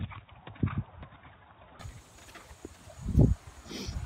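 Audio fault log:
0.0–1.8 s, input switched to a poorer device. The sound is dull and boxy, with nothing above 3.8 kHz. It is roughly 10 dB quieter, with a faint added noise floor. At 1.8 s it clears with no gap. A lower-grade input was likely active until then.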